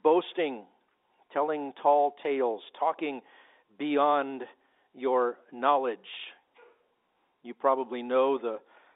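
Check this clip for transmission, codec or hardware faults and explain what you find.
Nothing to worry about here: the speech sits in the usual narrow telephone band of roughly 250 Hz to 3.7 kHz, which is just what ordinary G.711 phone-line coding sounds like.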